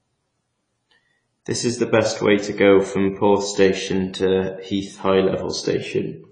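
From start to finish the speech sounds dull and smeared, with a watery, warbly edge on held sounds and a fizzy grain on the sibilants. Nothing comes through above 10 kHz, so the top end just stops. That's likely AAC compression, AAC-LC run at a low rate, and the damage is plainly audible. The encoder quantised the spectrum hard against its hearing model, which fits a bitrate of around 24 kbps.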